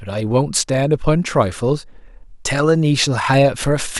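No technical faults are audible anywhere in the speech.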